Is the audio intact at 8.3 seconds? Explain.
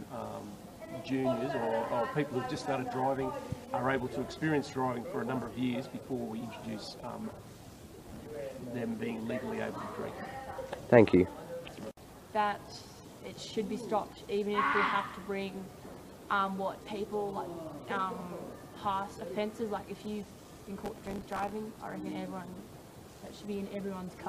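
No. At 8.3 seconds the audio sits inside a processor overload crackle, running from 8.04 to 8.37 s. The processor misses many short buffer deadlines in a row, each of a few milliseconds. Each miss repeats a scrap of old audio with hard edges. Together they make a gritty, tearing crackle.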